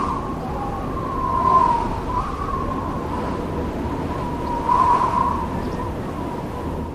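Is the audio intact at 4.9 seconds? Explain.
Yes, the audio at 4.9 seconds is intact, with no dropout, click, distortion or other fault at that moment.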